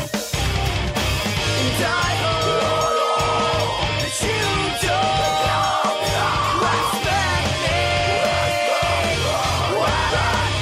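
At 6.61 s there is a brief burst of damaged data in the compressed stream. It happens again at 10.09 s. Each event lasts well under 20 ms. At those points some bytes in the encoded stream were lost or overwritten. The decoder cannot read the affected frame cleanly. It loses sync and hunts for the next valid frame header. Each event is heard as a short, harsh blip cutting across the sound.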